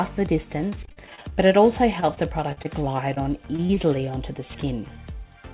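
From 0.70 to 1.52 s there is repeated packet loss, with a robotic sound. Twelve gaps open in quick succession, the longest 41 ms. Each is filled by extending the preceding sound, so about a quarter of this stretch is patched. It turns choppy. A second, lighter burst runs from 2.00 to 2.66 s, with four gaps of up to 42 ms.

Short concealed packet loss follows at 3.14 to 3.18 s, 3.56 to 3.60 s, 3.66 to 3.71 s and 3.75 to 3.78 s. Each time, about 20 ms of audio arrived too late to use. The receiver continued the previous sound across the hole and then blended back in. Each event is a brief smear or wobble. The last three come close together.

Throughout the clip, nothing is heard above 4 kHz, which fits a narrowband call codec such as G.711.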